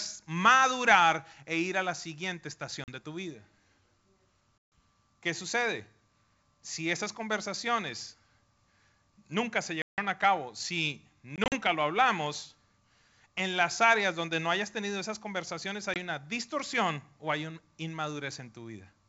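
Packet loss on an ADPCM call cuts hard holes at 2.84, 4.58 (140 ms), 9.82 (160 ms), 11.36 and 15.94 s. Each time, the decoder's predictor loses step, so the speech resumes slightly distorted. The 9.82 s gap falls between "nunca se" and "a cabo si". The 11.36 s loss comes after "a cabo si" as scattered short dropouts. The 15.94 s one comes after "hayas tenido esas conversaciones".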